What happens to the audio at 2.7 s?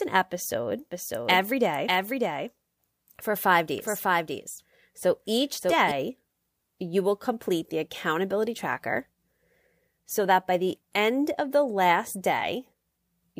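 At 2.7 s the speech is doubled. A doubled audio track runs from 0.92 s to 5.92 s. A second full-band copy trails the original by about 0.7 s. It sits roughly 5 dB quieter. It has no decay or room colour, so it sounds like a flat, overlapping repeat rather than an echo. It starts and stops abruptly at those edges. The likely cause is the same signal being captured again through a slower path.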